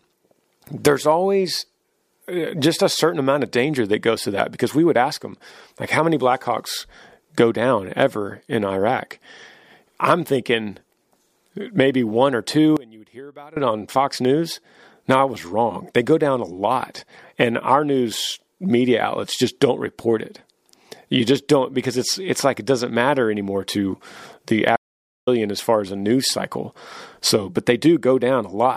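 Speech clip with two faults. After "maybe one or two", from 12.77 to 13.57 s, the voice sinks about 22 dB to a faint residue. That is likely one channel inverted cancelling in the mono sum, and unlike a dropout, faint sound remains. From 24.76 to 25.27 s, between "matter anymore to the" and "as far as a", there is an audio dropout to silence: 0.51 s of silence with no room tone, likely from lost input while recording continued.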